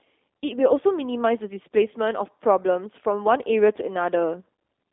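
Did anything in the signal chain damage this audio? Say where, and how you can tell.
Yes, at the codec: G.729 coding throughout leaves the spectrogram empty above 3.7 kHz and the speech rough and synthetic, fitting an 8 kbit/s stream.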